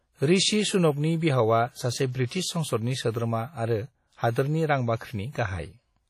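Throughout the speech the sound is ringing and washy, with a hiss that swells and fades along with the voice; this is likely WMA compression, and the heavy damage fits a low bitrate of about 32 kbps. The transform coder quantises long blocks coarsely, so its noise smears across tens of milliseconds and weak components are dropped. On a spectrogram, energy shows a patchy, holed texture where faint detail was zeroed.

Just after "ऋषि सुनकनि बिहावा सासे", pre-echo appears from 2.26 to 2.31 s, and again from 4.31 to 4.36 s. Each sharp onset falls late in a coding block, so noise sized for the loud attack spreads backward into the quiet before it, over about 50 ms and 54 ms. Each attack is heard as a brief hiss leading into a softened, smeared onset. The waveform shows a low fuzzy ramp ahead of each transient, and the spectrogram shows a faint broadband smear preceding the attack.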